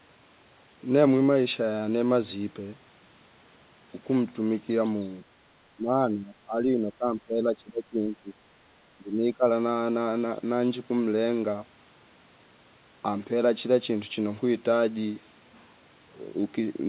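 Between 5.77 and 8.4 s, and again from 8.96 to 9.45 s, the echo canceller likely mistook overlapping talk for loudspeaker echo, causing speech suppressed in double talk. The speech sinks by about 20 dB, then about 15 dB.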